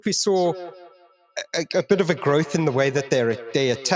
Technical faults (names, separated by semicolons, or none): feedback echo between two devices